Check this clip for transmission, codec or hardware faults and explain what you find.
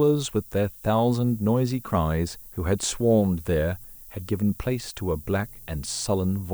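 Two faults are audible in this speech clip.

Throughout, a steady, thin hiss climbs sharply toward the top of the band, around 25 dB below the speech. This is low bit depth with noise shaping, consistent with 8-bit samples: the rounding error is pushed upward in frequency.

From 5.00 s to the end, a steady 60 Hz mains hum appears, some 35 dB below the speech. The power line is coupling into the signal, typically through a ground loop or a nearby transformer.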